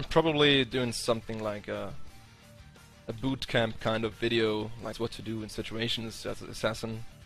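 At about 4.93 s the audio gives a brief glitch, a very short burst under 20 ms, caused by damaged data in a compressed stream. Part of the encoded file was lost or overwritten, so the decoder misread the affected frames, lost sync and had to hunt for the next valid frame header. What separates it from a plain dropout or buffer-underrun click is its cause: the decoder losing sync on corrupted frames rather than the playback chain running short of samples. Corrupted frames are either misread into garbled output or refused, leaving a short hole.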